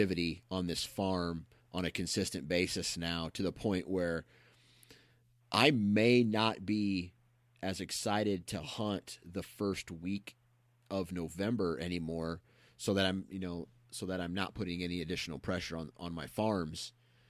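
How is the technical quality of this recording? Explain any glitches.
No technical glitches can be heard anywhere in this speech recording. Nothing in it calls for a timestamp or an explanation.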